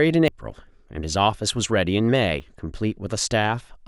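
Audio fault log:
0.28 s and 2.4 s: dropped buffer (overrun). The likely cause is the capture program falling behind, so the hardware overwrote samples before they were read. That lost stretch, around 70 ms at the first point and around 40 ms at the second, never reaches the recording. The audio on either side is butted together with no gap, so each spot is heard as the speech lurching abruptly forward.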